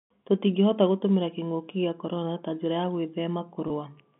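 At 3.68 to 3.70 s, packet loss with pitch repetition fills a 20 ms gap by copying the last pitch period. It sounds like a buzzy hold and shows as identical waveform cycles and frozen spectrogram harmonics.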